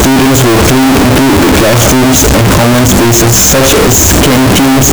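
From start to finish the speech is blasted into a harsh, saturated buzz where background noise is as loud as the talker, yet the pitch contour survives. This is float read as integer: 32-bit float samples likely decoded as 32-bit integers, so sign and exponent bits dominate each value. The waveform shows near-square blocks at an almost fixed, high level, and a spectrogram shows dense broadband energy filling every frequency band.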